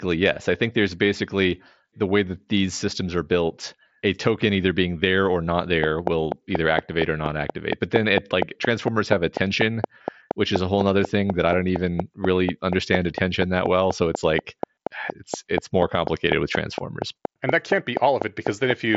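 A speech recording, carried over an mSBC Bluetooth headset link that cuts everything above about 7.7 kHz, has a train of clicks starting just after "being there or not" at 5.84 s and running to 18.96 s. Around fifty near-identical pops land at a steady 4.19 per second, peaking roughly 20 dB above the speech and continuing through pauses. A waveform shows evenly spaced sharp spikes, and a spectrogram shows thin vertical broadband lines. The likely cause is interference from nearby equipment or a faulty connection or power supply.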